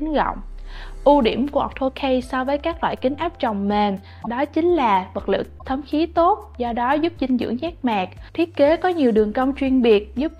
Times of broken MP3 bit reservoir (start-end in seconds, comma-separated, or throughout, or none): 4.22-4.27, 5.58-5.62